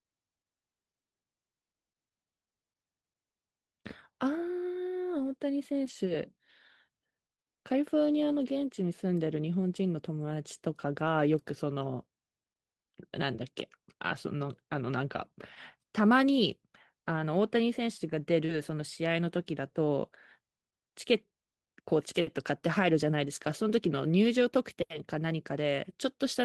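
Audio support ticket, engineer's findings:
Lost packet rebuilt from error correction, 5.85–5.95 s, 8.31–8.33 s, 11.83–11.85 s and 18.49–18.59 s: no gap, but rougher, noisier patches. The first and last span 60 ms, consistent with three 20 ms frames. The decoder played Opus in-band FEC low-bitrate copies. On a spectrogram the harmonics blur into grainy noise. On the waveform the envelope stays continuous.

Short concealed packet loss, 18.45–18.51 s: a brief smear or wobble where about 40 ms arrived too late. The jitter-buffer decoder extended the preceding sound, then cross-faded back. On a spectrogram the partials flatten briefly just before the FEC patch.

The Opus call path runs at 24 kbps, with content extending to about 12 kHz.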